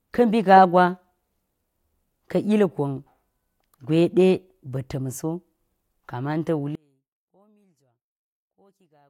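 From 6.75 s through to the end, the speech falls away by about 37 dB to a faint trace. That's one channel inverted: one side likely has flipped polarity, so the centred voice cancels itself out when the channels are summed to mono.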